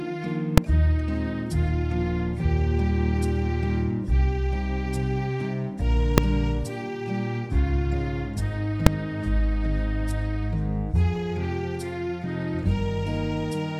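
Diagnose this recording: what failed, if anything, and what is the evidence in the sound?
Three sharp bangs are heard, at 0.58 s, 6.18 s and 8.87 s. Each is invalid numbers at full scale. A calculation in the processing chain produced infinite or invalid values. They were clamped to the largest sample value. The output then sat pinned at full scale for one block. The blocks are about 2.7 ms, 1.3 ms and 2.7 ms long. Those fit blocks of 128, 64 and 128 samples. That is too short to hear separate pops, so each event lands as one bang.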